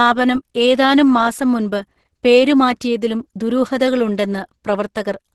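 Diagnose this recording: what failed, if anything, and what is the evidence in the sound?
The codec stage failed: heavy low-bitrate compression, likely Opus compression, runs through the whole speech clip. Nothing survives above 12.1 kHz, and the voice sounds muffled, hoarse and grainy, which fits Opus falling into its hybrid speech mode at around 12 kbps.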